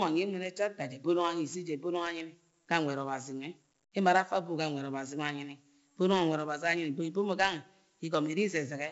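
From start to finish the speech carries 4-bit ADPCM compression, and it's heavy: each sample is coded as a coarse step from a prediction, so a gritty hiss rides on every loud syllable and sharp onsets distort. Nothing above 7.7 kHz, which fits a 16 kHz rate at about 64 kbps.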